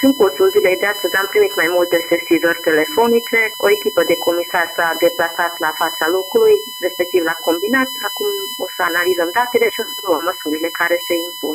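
From start to finish the audio carries USB whine, a fixed tone at 1 kHz with its strongest component at the 3 kHz harmonic, roughly 10 dB below the signal. The 1 kHz fundamental fits current drawn in 1 ms bus frames leaking in through power or ground. It sounds like a steady high-pitched whine under everything. On a spectrogram it shows as unbroken horizontal lines at 1 kHz and its multiples, brightest at 3 kHz.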